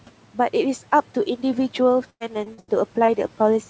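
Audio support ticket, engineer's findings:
Choppy, robotic stretch, 2.10 to 2.70 s. Repeated packet loss (robotic sound): four gaps, the longest about 100 ms, and concealment covers about 40% of the span. Each hole is patched by extending the previous sound, so the gaps stack and pieces go missing.

Brief smear or wobble, 3.06 to 3.10 s. Short concealed packet loss: about 20 ms never reached the decoder in time. The receiver extrapolated from the preceding audio and then crossfaded back into the real stream, so a short consonant may drop out.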